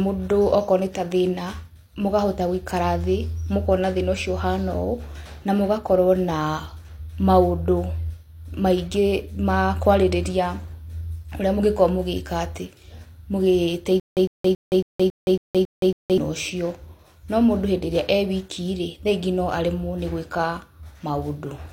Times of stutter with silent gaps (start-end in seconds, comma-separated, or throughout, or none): 14.00-16.18